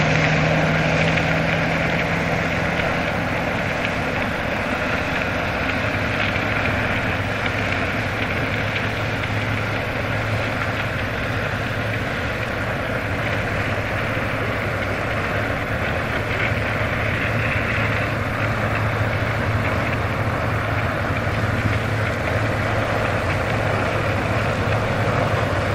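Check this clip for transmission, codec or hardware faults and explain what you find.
Nothing wrong turned up here; I listened all the way through and there's no trouble to point to.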